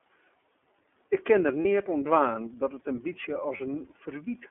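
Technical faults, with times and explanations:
Throughout, iLBC codec: the sound is confined to roughly 250 Hz to 3.5 kHz, so nothing above about 4 kHz survives and the speech sounds thin and boxed in. The codec damage is plainly audible as a rough, slightly synthetic grain. Each frame's excitation is coded on its own without drawing on the one before, which fits the 13.33 kbps mode with 30 ms frames. That independence costs detail, and the coarse residual modelling leaves the voice rough.
1.62–1.66 s and 3.57–3.61 s, lost iLBC frames: each gap lasts 30 ms and follows "kin der" and then "dat it in bytsje". The missing audio is filled with a brief held, faintly buzzy vowel-like tone. The decoder repeats the last pitch cycle mixed with noise, and each gap fits a single lost 30 ms frame. Because each frame decodes independently, the speech recovers almost at once after both dropouts.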